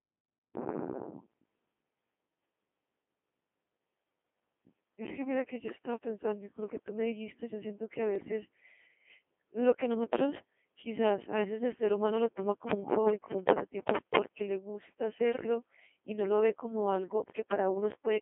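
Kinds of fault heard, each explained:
Codec 2 vocoder: the speech is rebuilt from sine waves by a 2.4 kbit/s vocoder in a 200 Hz to 3.5 kHz band, so it sounds heavily robotic and buzzy.
Bit errors on digital voice radio: from 5.68 to 5.86 s, a few percent flipped bits corrupt several vocoder frames, so the voice jumps in pitch and level and breaks into warbling gibberish.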